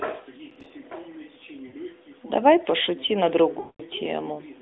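From 0.50 to 0.70 s a gritty burst of crackle tears across the speech, then stops abruptly. This is processor overload crackle. The processor fell behind on its audio buffers, and roughly ten deadlines in a row were missed. Each miss dropped in a hard-edged sliver of silence, which fits buffers of around 4 ms. Heard in quick succession, those tiny dropouts turn into tearing grit rather than separate clicks.

At 1.68 to 1.76 s the speech briefly sags and warbles for about 60 ms, then picks up again slightly rough. From 3.60 to 3.82 s a longer stretch of about 200 ms smears out, drawn-out and fading toward silence before recovering weakly. Both are lost AMR speech frames. Corrupted frames were discarded, and the decoder bridged the gaps by repeating its last good pitch and vocal tract settings with shrinking gain. The first gap points to about three missing 20 ms frames and the second to about ten. 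The narrowband telephone character of the AMR narrowband codec, cut off at about 3.7 kHz, is audible throughout and points to roughly 12.2 kbps.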